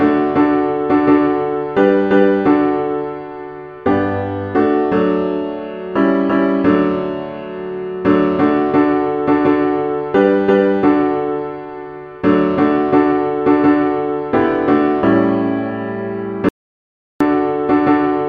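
At 16.49 s the audio drops out to silence until 17.20 s, a gap of about 0.72 s. The sound cuts off abruptly and returns mid-flow, with no room tone in between, likely because the input was lost while recording continued writing silence.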